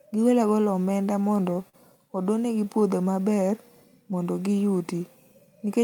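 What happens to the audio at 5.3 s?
Nothing goes wrong at 5.3 s; the speech continues intact through that moment with no dropout, click or other fault.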